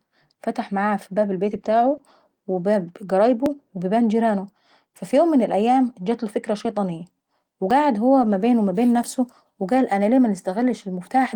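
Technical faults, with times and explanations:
1.45–1.59 s, lost packet rebuilt from error correction: right after "فتح معاها في باب", about 80 ms are played from a low-bitrate backup copy, so the sound turns briefly rougher and noisier.
1.61 s, short concealed packet loss: about 20 ms never arrived, and the decoder extended the preceding sound to fill it, leaving a brief smear before it blends back.
1.65–1.95 s, lost packet rebuilt from error correction: a longer stretch of about 160 ms is rebuilt from the coarse redundant copy, giving a sustained grainy, noisier quality.
1.97 s, short concealed packet loss: another 20 ms hole is filled by continuing the last sound, heard as a short wobble at the end of the damaged stretch.
3.25–3.31 s, lost packet rebuilt from error correction: about 40 ms come from the backup copy, so the sound briefly roughens with added noise.
3.46 s, dropped buffer (overrun): a small jump forward, likely because a few milliseconds of samples were overwritten before being collected and the two sides were joined directly.
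5.11 s, lost packet rebuilt from error correction: a single 20 ms frame decoded from the low-bitrate copy causes a momentary roughness.
6.65 s, dropped buffer (overrun): a few milliseconds are missing, likely samples overwritten before collection, so the sound skips ahead.
7.71 s, dropped buffer (overrun): a slightly larger jump of around 10 ms, likely from a buffer overwritten before it was read.
8.21–8.35 s, lost packet rebuilt from error correction: about 80 ms are rebuilt from the redundant copy, heard as a coarser, noisier passage.
9.03 s, dropped buffer (overrun): just after "ما بين", a skip of around 10 ms, likely a buffer lost before collection and the edges spliced together.
9.72–9.82 s, lost packet rebuilt from error correction: about 60 ms come from the backup copy just before "انا ليه", so the sound there is rougher and noisier.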